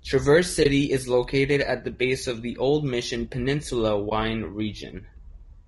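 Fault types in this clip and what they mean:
Low-delay AAC compression: The speech sounds plainly rough and grainy throughout, with a noisy haze between the harmonics and a thin, synthetic top end. The likely cause is low-delay AAC-ELD coding, whose short frames resolve pitch poorly, and the damage fits a bitrate of around 32 kbps.
AAC frame loss with muting: The sound briefly fades out and back in at 0.63 to 0.66 s, just before "is located at the", and again at 4.09 to 4.12 s. Each gap is a brief dip of about 20 ms, consistent with a single lost frame the decoder filled with silence.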